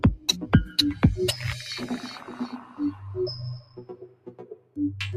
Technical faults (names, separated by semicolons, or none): noise suppressor applied to music or sounds; sound cut by the noise suppressor